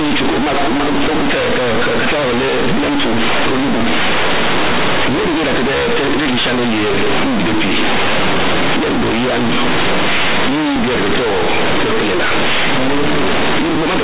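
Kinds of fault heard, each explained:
Companded audio read as linear: this speech was stored as mu-law bytes but is played as plain linear 8-bit samples, so the logarithmic expansion never happens. Each sign change throws the output across roughly half its range, making quiet stretches as large as loud ones, which produces a harsh, very loud buzz with heavy noise in pauses. The waveform looks like a dense, near-constant-height slab, and the spectrogram shows broadband smear up to the 4 kHz telephone band edge.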